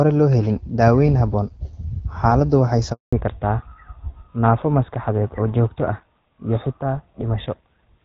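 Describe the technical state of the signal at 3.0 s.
At 3.0 s you're right inside a handover gap. Just after "xaaladdu waxay" the speech fades out within a few tens of milliseconds and stays silent from about 2.93 to 3.13 s, a 200 ms hole where no frames reached the phone while the call switched networks.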